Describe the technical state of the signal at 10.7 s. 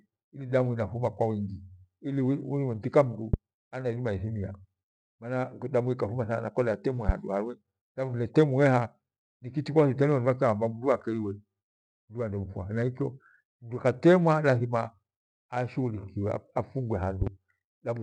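At 10.7 s the speech signal is intact, with no dropout, click, distortion or other fault audible at that moment.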